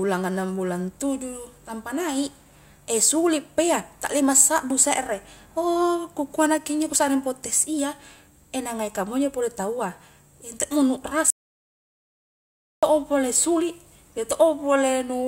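At 11.30 s the input feeding the recorder was likely lost, perhaps through a disconnected device, a failed link or a stray mute, while the recording carried on writing silence. The result is an audio dropout to silence: the speech cuts off abruptly and the signal falls to silence with no room tone beneath it. After 1.52 s, at 12.83 s, the speech resumes mid-flow, and whatever was said in that gap is gone.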